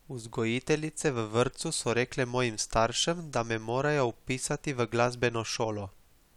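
No technical faults can be heard anywhere in this recording.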